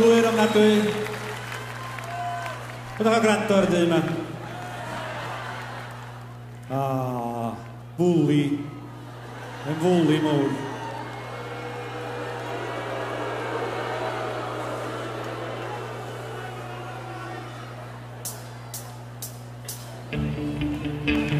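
From the first second to the last there's a steady mains hum sitting under everything, locked at 60 Hz with a few low harmonics stacked above it. Something like a ground loop or a nearby transformer is letting the power line leak into the signal path. It's not subtle either: it sits only around 15 dB below the wanted audio, so you hear a constant low drone that never lets up.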